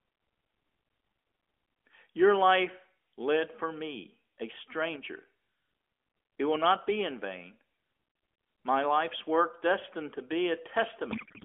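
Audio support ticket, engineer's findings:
Codec payload misread, 11.12 s to end of clip: speech collapses into garbled noise and warble barely tracking it, consistent with octet-aligned AMR-NB frames parsed as bandwidth-efficient, shifting every field. Narrowband AMR path (300 Hz to 3.4 kHz, light coding buzz) audible before the failure.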